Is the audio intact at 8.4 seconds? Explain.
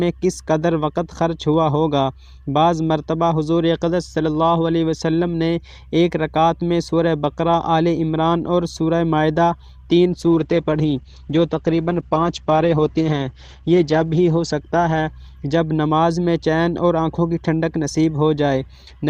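Yes, the audio is intact at 8.4 seconds, with no dropout, click, distortion or other fault audible at that moment.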